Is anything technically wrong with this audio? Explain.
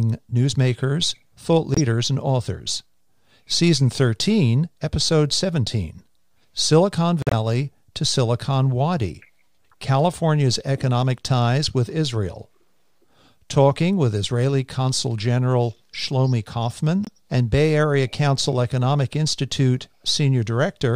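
Yes, there are corrupt frames muted. Damaged compressed frames were rejected by the decoder and replaced with silence, cutting abrupt gaps of a few frame lengths while timing stays intact. This happens at 1.74 to 1.80 s, between "newsmakers thought" and "and authors", at 7.22 to 7.33 s, and at 17.05 to 17.09 s.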